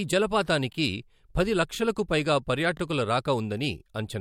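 Brief stutters or clicks at 0.73–0.75 s, 2.77–2.80 s and 3.80–3.82 s come from overlapping chunks: each new 1-second chunk starts early, replaying about 23 ms of speech.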